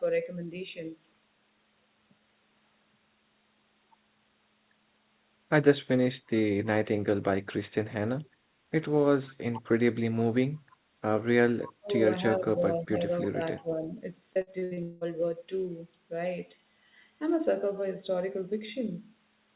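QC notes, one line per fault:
8.29–8.43 s, background gated by the echo canceller: While the far-end loudspeaker was active, the echo canceller clamped the microphone path, so the room sound dips by about 11 dB for roughly 150 ms, then returns as soon as the canceller releases.
9.51–9.61 s, 11.78–11.90 s, 12.28–13.06 s, 13.31–13.40 s, 13.56–13.91 s, speech suppressed in double talk: Both sides likely talked at once, and the canceller, unable to tell local speech from loudspeaker echo, turned everything down. The speech sinks by roughly 10 to 30 dB in these patches, deepest near 11.8 s and longest around 12.3–13.1 s.
10.71–10.75 s, echo leak: The far end's echo canceller likely failed to remove all of the loudspeaker sound reaching its microphone, so a faint copy of the speech comes back about 319 ms late. It is a brief scrap, sitting roughly 35 dB below the direct speech.
14.33–15.04 s, repeated packet loss (robotic sound): Packets went missing six times in quick succession, the longest hole about 182 ms. 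Each gap is patched by stretching the preceding sound, so just over half of this stretch is concealment. This gives a choppy, robotic quality with pieces missing, heard against the call's narrow band that carries nothing above 4 kHz.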